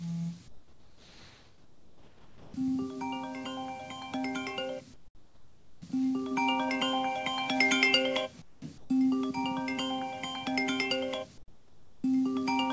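Comfort noise in place of the background appears in this recording of everyday sounds at 0.48–2.54 s, 4.94–5.82 s, 8.42–8.62 s, 8.78–8.90 s and 11.38–12.04 s. In each quiet stretch the real ambience gives way to a flat, featureless hiss about 7 to 13 dB quieter, likely because the sender's discontinuous transmission stopped sending audio and the receiver synthesised noise instead. Through the call path nothing is heard above 8 kHz, consistent with a wideband G.722 codec.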